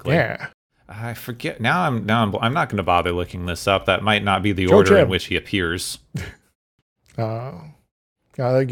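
Speech, with a block size mismatch (truncated) running through the whole clip: a steady buzz at 46.9 Hz, which fits 1024-sample blocks, comes from the tail of every block being discarded before the next stage reads it. Unlike random dropouts or packet loss, the gaps are perfectly regular, so they fuse into a constant tone rather than scattered clicks. Here the pace is unchanged (1.0×), showing only a tiny slice of each block is lost.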